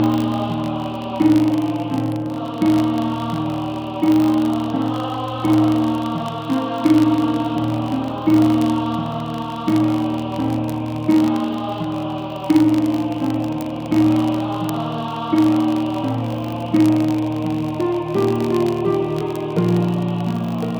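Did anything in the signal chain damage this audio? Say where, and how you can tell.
Yes. A filter restarted on every block in the processing stage leaves a 50 Hz buzz throughout, tracking signal level, because each block starts from zero state with a small transient.

Word clock ticks appear at the digital interface from 0.12 to 20.77 s, sharp and uneven, roughly every 0.07 s: an unlocked receiver clock, off by around 300 ppm, slips one sample each time.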